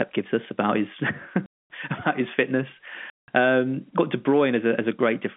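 Packet loss filled with silence cuts the speech from 1.46 to 1.67 s, just before "his fitness", and from 3.10 to 3.28 s, right after "his fitness". Lost packets were replaced by dead silence, leaving hard-edged holes with lengths that fit 20 ms packets, all through the 200 Hz to 3.5 kHz telephone band.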